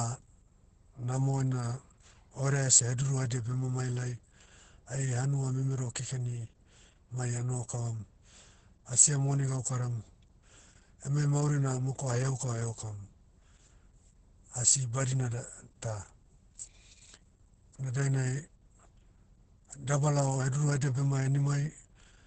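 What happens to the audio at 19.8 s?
At 19.8 s, Opus voice compression is heard, as everywhere: SILK's coarse excitation coding leaves the speech muffled and hoarse, with nothing above 8.7 kHz, consistent with roughly 10 kbps.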